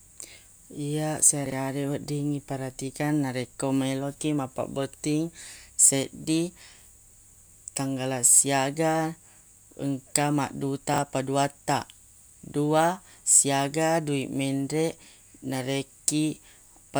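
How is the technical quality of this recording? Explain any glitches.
The recording has two brief glitches, both chunks out of order. At 1.46 to 1.52 s, just before "wedding iperatikang narekko melo", one 20 ms chunk plays two chunks late. At 10.94 to 10.98 s, before "paduattaq dua siaga dui", one plays a single chunk late. Each late chunk sits in the wrong place, producing a jumbled flicker with three hard joins. Unlike a dropout, no audio is missing and there is no gap.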